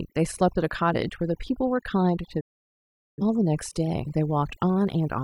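Overdone noise removal runs through the whole speech clip. The noise reducer was set so aggressively that any frequency band close to its noise estimate was pulled far down or switched off, and the quieter parts of the voice were cut along with the noise. The voice sits over a near-silent background that twinkles with small specks. On a spectrogram the background is mostly dark, scattered with isolated bright dots, and the speech harmonics look patchy and eaten away at their edges.

A digital broadcast dropout follows from 2.40 to 3.22 s. The receiver stopped getting usable frames, so it muted until clean data came back. The sound fades out in about 8 ms, stays silent for roughly 0.8 s, and then returns mid-programme with the audio sent during the gap missing. That span fits a run of consecutive lost frames. The waveform drops to a flat line after a very short taper, and the spectrogram shows a blank vertical band across all frequencies.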